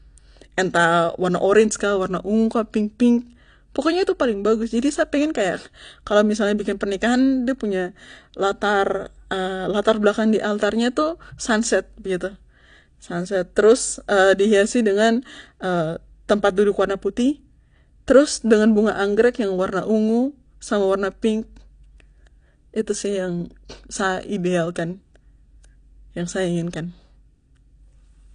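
Throughout, the speech stops at 9.8 kHz and sounds smeared and warbling, likely AAC compression whose coarse quantisation fits a bitrate near 32 kbps.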